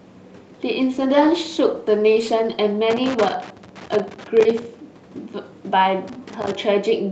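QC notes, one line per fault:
0.83–2.65 s, call bitrate drop. The call's bandwidth estimate fell and the Opus encoder dropped from 64 to 13 kbps. It held its lowest rate for about 1.76 s. Coarser coding makes the speech sound rough and watery. The top end also narrows until the bitrate recovers.
2.90–4.65 s and 6.08–6.55 s, loose connector crackle. A worn or dirty contact is rapidly making and breaking. This chops the signal into an irregular burst of crackle and scratching. The first burst lasts nearly two seconds. The second is shorter, about half a second.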